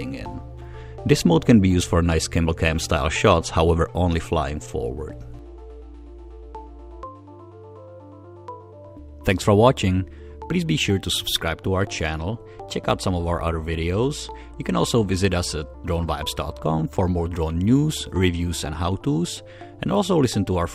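Nothing is technically wrong with the audio.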